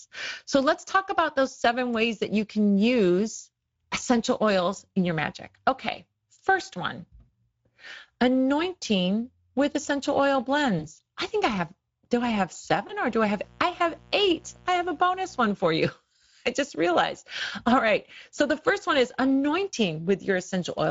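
Throughout, the speech carries Speex codec damage, and it's plainly audible. The hoarse, noisy grain fits a mid-quality Speex mode around 16.8 kbps. CELP at that rate doesn't have many bits for the excitation, so the fine detail of the voice gets approximated. What you hear is that rough, buzzy edge on the speech rather than a clean tone.

There are two spots of VoIP packet loss concealed by the speech codec. The first comes right after "anointing with essential oil", at 10.79 to 10.85 s, just before "I think I have". The second is at 12.87 to 12.93 s, right after "have do I have". Each sounds like a single lost 20 ms packet. The decoder keeps going on its last pitch and filter and turns the gain down, so the sound smears into a brief, fading blur. Because each frame builds on the last, it takes a few tens of milliseconds to settle back.

Then from 13.06 to 15.43 s, ending just before "for you", there's a mains buzz at 60 Hz, sitting roughly 30 dB under the speech. 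It's a steady, raspy buzz rather than a smooth hum. That rasp comes from sharp switching spikes twice per mains cycle, the sort a dimmer or rectifier puts in, which throw harmonics of 60 Hz well up into the kilohertz range.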